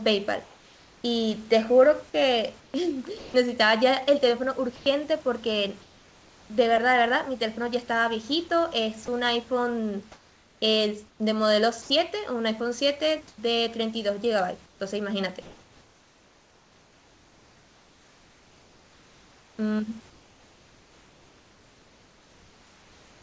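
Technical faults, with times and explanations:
0.44–3.34 s and 9.06–11.90 s, sound chopped by the voice detector: the speech turns choppy, with quiet syllables and word edges dropping out while the background flickers between the real room noise and a smoother synthetic hiss. About 0.94 s is replaced in the first stretch and about 0.72 s in the second. The likely cause is the sender's voice detector repeatedly switching transmission off and on, with comfort noise filling each gap.
4.76 s, sound dropped by the voice detector: a brief 100 ms gap where a quiet bit of speech gives way to steady noise, with about 50 ms of actual sound lost before the speech returns. The likely cause is the voice detector misjudging that soft moment as background and halting transmission, so the receiver played comfort noise until the detector triggered again.
4.76–6.50 s and 13.28 s to the end, comfort noise in place of the background: the room noise, which sits about 32 dB below the speech and is band-limited to 8 kHz by the G.722 call path, is swapped in pauses for a flat, featureless hiss. 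About 0.78 s is replaced in the first stretch and about 7.5 s in the second. This likely comes from discontinuous transmission, with the receiver synthesising noise shaped roughly like the background while nothing is sent.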